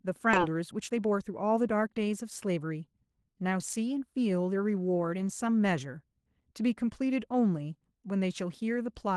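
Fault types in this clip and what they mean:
Skip ahead: at 0.33 s about a second of speech vanishes and playback jumps straight on with no silence, unlike a dropout, which leaves an audible gap.
Jitter buffer speed-up: from 0.47 to 2.71 s the speech runs at 114% speed while keeping its pitch, trimming about 0.3 s, unlike resampling, which also raises pitch.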